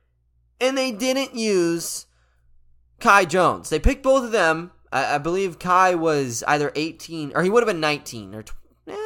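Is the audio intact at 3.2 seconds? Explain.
Yes, at 3.2 seconds the speech plays through cleanly, with no dropout, click, distortion or other fault to be heard at that moment.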